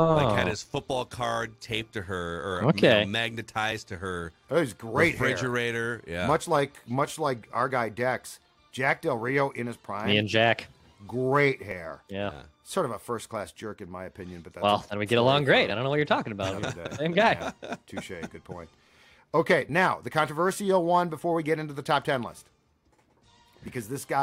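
From the start to 1.95 s there is overlap-add ripple. Windowed frames were rejoined with an overlap whose gains don't sum evenly, so the level swings by about 6 dB at around 150 Hz, giving a metallic buzz with extra tones around each note. The waveform envelope shows fine regular scalloping.

At 3.72, 7.71, 11.71, 15.70, 19.69 and 23.68 s there is overlap between stream segments. At each 4-second segment boundary, overlapping timestamps caused a sliver of real sound to be trimmed. Each is a brief click or skip: a waveform jump and a thin vertical spectrogram line.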